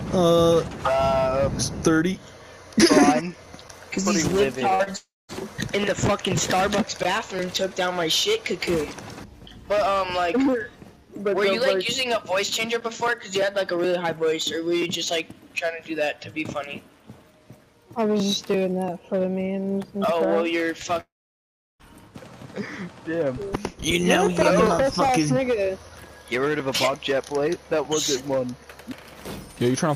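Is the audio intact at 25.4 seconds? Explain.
Yes, the audio is intact at 25.4 seconds, with no dropout, glitch or other fault at that moment.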